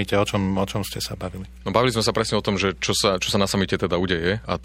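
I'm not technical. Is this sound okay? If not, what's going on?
No. Mains hum runs throughout the speech: a steady, fairly noticeable 60 Hz buzz from mains power leaking into the recording, likely through a ground loop or nearby transformer.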